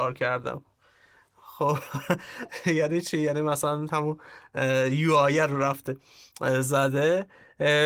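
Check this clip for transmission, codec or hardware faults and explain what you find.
No transmission, codec or hardware faults.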